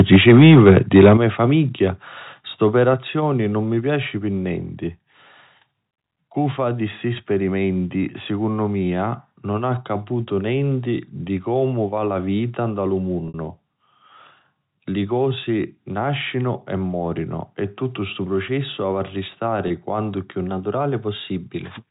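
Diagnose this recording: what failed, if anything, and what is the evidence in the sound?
Microphone overload, at the converter stage, runs from 0.0 to 1.13 s. The peaks go about 5 dB past full scale and roughly a tenth of the samples are cut off, giving a harsh crackle. The waveform shows flat-topped peaks, and the spectrogram shows broadband smear above the harmonics. The likely cause is excessive input volume.

Microphone volume stepped down three times, in call processing: about 3 dB at 0.16 s, about 9 dB at 1.17 s and about 4 dB at 2.94 s. Both the sound and the background fall abruptly, and the waveform envelope drops in clean stairs. These steps match automatic gain control reacting to the clipped peaks.

Packet loss with pitch repetition, at the network stage, affects 13.28 to 13.34 s (60 ms, which fits three packets) and 19.68 s (20 ms, one packet). The gaps were filled by looping the last pitch period. 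The spectrogram shows frozen, repeated harmonic stripes, and the longer gap fades in level before the audio resumes.

A drift correction step, at the driver or buffer stage, begins at 20.48 s and lasts until the clip ends. Playback speeds up by 5.44% and pitch rises by 91.6 cents, close to a semitone, so the sound audibly detunes. On the spectrogram the harmonics jump upward together. The likely cause is clock-matching adjusting the playback rate.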